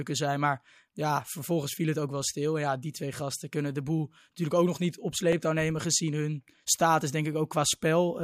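A brief stutter at 5.33 s, between "ook nog niet op" and "nemen gezien hun status": overlapping chunks, with about 6.5 ms replayed where 2-second blocks join.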